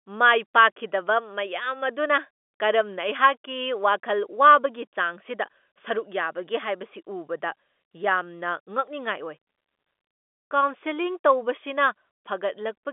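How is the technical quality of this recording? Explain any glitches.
No glitches or technical faults turn up anywhere in the recording. It comes through a G.711 telephone coding path, so the speech sits in a narrow line band of roughly 250 Hz to 3.5 kHz with nothing above about 3.8 kHz, and any coding noise is faint at most.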